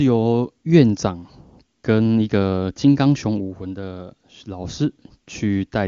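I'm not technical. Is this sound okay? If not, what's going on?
Yes, nothing wrong can be heard in this speech; it comes over the AMR wideband (HD Voice) codec used for phone calls, with no audible damage from it.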